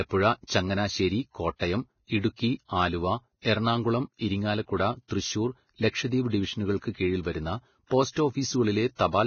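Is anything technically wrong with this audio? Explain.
Yes. All the way through this speech clip there's heavy damage that sounds like Vorbis compression, likely from a low-bitrate encode, roughly what you'd expect around 18 kbps. Nothing comes through above about 6.5 kHz, so the top end is just gone. What's left of the treble has been quantised so coarsely that the fine detail has turned into hiss-like noise of similar energy, which makes the speech sound grainy and rough, and the onsets come out smeared rather than crisp.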